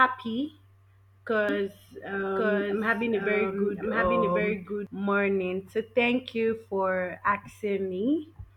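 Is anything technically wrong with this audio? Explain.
Yes. From 1.49 s to 4.87 s there is a doubled audio track: the speech is joined by a second copy running about a second behind, at roughly the same level. It is likely a second capture path or misaligned edit holding two copies. The copy cuts in and out abruptly with no reverb tail. A spectrogram shows full-band speech patterns repeated about one second later, overlapping the originals, and the waveform shows their sum.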